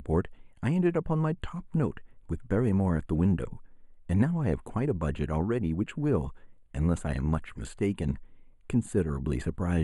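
Channel delay (comb filtering) runs through the whole speech clip: one channel arrives late by a tiny fraction of a millisecond, which fits a lag of a few samples, and summing to mono cancels shared content around 5 kHz, leaving the upper range dulled and hollow.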